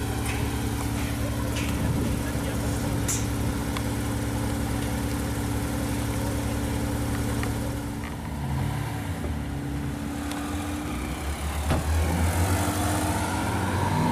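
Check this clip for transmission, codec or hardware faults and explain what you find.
Nothing here points to a transmission, codec or hardware problem, so there's nothing to flag.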